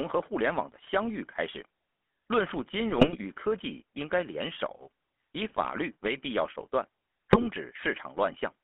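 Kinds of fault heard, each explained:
GSM full-rate codec: The whole clip runs through a 13 kbps coder that models the vocal tract and drives it with regularly spaced pulses. The speech sits in a narrow 250 Hz to 3.4 kHz band with a plainly audible buzzy, gravelly roughness.
GSM bit errors: Corrupted filter, pitch or gain values distort the spectrum and level of individual frames, producing squawks, pops and gargling in four bursts: 0.82 to 0.89 s, 2.90 to 3.18 s, 5.47 to 5.66 s and 7.30 to 7.46 s.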